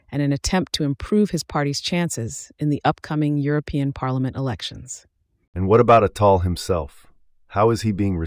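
A recording of speech, with no technical fault to be heard at any point. Nothing in the audio points to a problem with how it was captured, processed or delivered.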